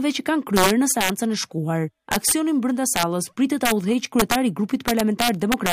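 Integer overflow: loud peaks pushed the signal past the largest integer value, and instead of being limited it wrapped to the opposite sign. Harsh cracks, sharper than clipping, hit at 0.56–1.10 s, 2.12–2.32 s (about 6 dB over), 2.96–3.03 s, 3.65–3.72 s, 4.19–4.35 s and 4.88–5.73 s.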